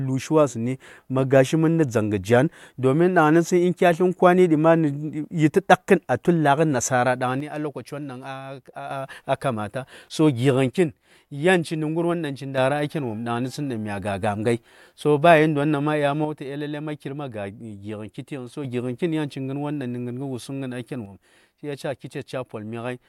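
The speech drops abruptly by about 6 dB four times, holding a flat, lower level before snapping back the first three times: from 7.40 to 8.91 s, 10.69 to 12.58 s, 16.25 to 18.65 s, and from 21.06 s through to the end. The sudden, step-like change with no fade points to one channel drops out as the likely cause. With one stereo side lost, the mono sum carries only half the shared signal, and anything present only in the missing side vanishes.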